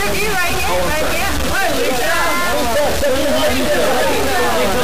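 Throughout, a stuck bit, likely a converter bit held fixed, offsets samples by around -15 dBFS, giving harsh buzzing distortion and loud noise in quiet stretches.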